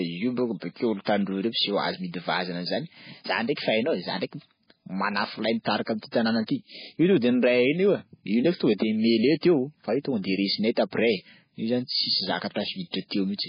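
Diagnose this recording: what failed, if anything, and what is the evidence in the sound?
The codec stage most likely failed: heavy MP3 compression at a starved bitrate, consistent with something near 16 kbps. Throughout the speech nothing survives above 5 kHz, and weak spectral lines flicker between frames, giving a watery, swirly texture with metallic chirping on sibilants and smeared consonant attacks.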